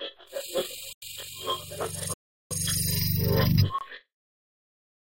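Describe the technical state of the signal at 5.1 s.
At 5.1 s the audio is intact, with no dropout, clipping, glitch or other fault audible at that moment.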